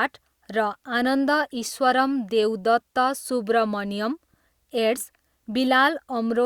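No technical faults were found anywhere in the speech.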